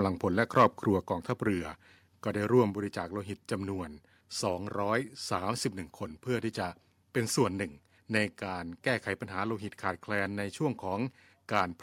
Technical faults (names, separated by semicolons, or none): microphone overload; microphone volume stepped down